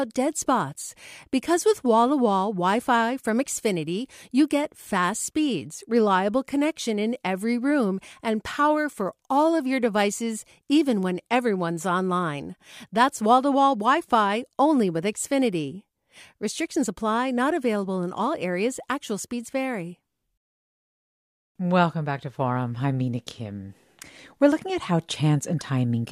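No technical faults can be heard anywhere in the recording.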